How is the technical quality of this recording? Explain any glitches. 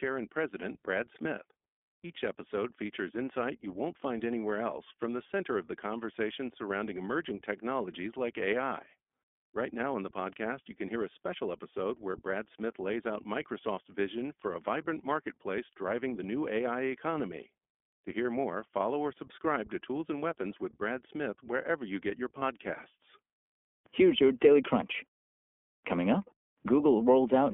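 The recording has clear technical damage: the whole clip passes through a narrowband voice codec, and the speech is briefly glitched twice.

The iLBC codec is present from start to finish. It codes each short frame's excitation independently, and the sound points to its 15.2 kbps mode with 20 ms frames. The line band runs from 250 Hz to 3.4 kHz, so the speech has no low bass and nothing above that ceiling. The codec damage is plainly audible as a rough, slightly synthetic texture.

Lost iLBC frames occur at 1.36–1.39 s and at 22.40–22.43 s. In each spot, roughly one 20 ms frame went missing, and the decoder covered the gap by repeating the last pitch cycle blended with noise. Each gap is heard as a very brief held, faintly breathy buzz. Because iLBC frames stand alone, the speech recovers cleanly right after each gap.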